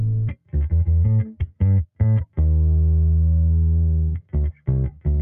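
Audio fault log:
Throughout: noise suppressor applied to music or sounds. A suppressor built for speech stays active on this non-speech audio and treats steady tones, ambience and decay as noise to be removed. Its gain rides up and down by about 10 dB as it reacts. Onsets pass mostly intact. Sustained parts get pulled down. The result is a pumping, unsteady level and a thinned body, with tails that fall away faster than they should.
0.30–0.55 s, 1.40–1.61 s, 4.15–4.35 s, 4.52–4.68 s, 4.90–5.06 s: sound cut by the noise suppressor. In each window the suppressor misreads the sound as noise and drops it by as much as about 12 dB. Each dip lasts a fraction of a second. The held or fading portion sinks while any sharp start stays clear. The three late cuts come close together near the end of the clip.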